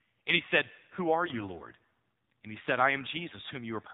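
Throughout, the speech passes through the AMR narrowband mobile codec at a low bitrate, which fits roughly 7.4 kbps, so nothing above 4 kHz survives and voices sound plainly buzzy and synthetic. From 1.26 to 1.44 s, AMR bit errors corrupt several consecutive 20 ms frames, misplacing excitation pulses so the voice keeps its pitch but turns hoarse and gargly.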